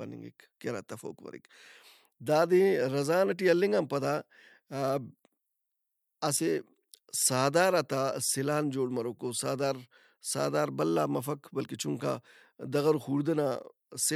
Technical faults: none

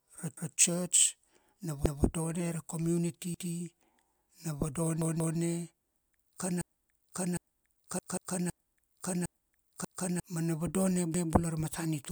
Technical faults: repeated buffer; broken-record loop

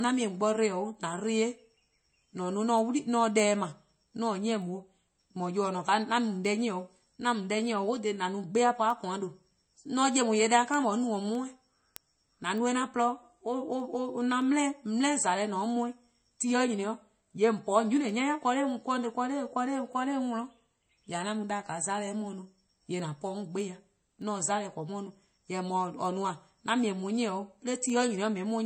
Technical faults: MP3 compression; word clock ticks

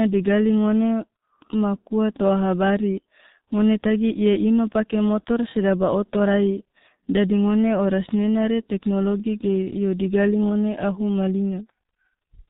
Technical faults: G.723.1 codec

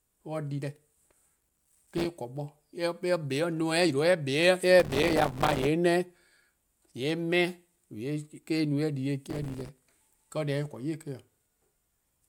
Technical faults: processor overload crackle

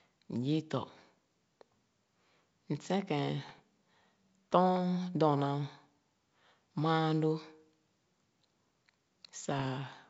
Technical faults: bit errors on an ADPCM link

